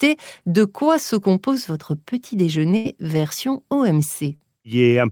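Right after "se compose votre petit", at 2.76 to 2.88 s, a burst of packet loss hits: about 82 ms of the last sound is stretched and faded, then 40 ms is skipped. Around 4.36 to 4.50 s there's short concealed packet loss, where roughly 41 ms is patched from the preceding audio and blended back, leaving a quick smear or wobble.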